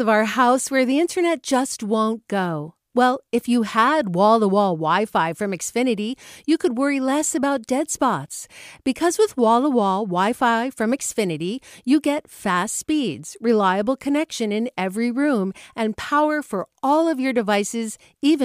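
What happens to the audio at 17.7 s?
Nothing goes wrong at 17.7 s; the speech plays through that moment intact, with no dropout, click or distortion.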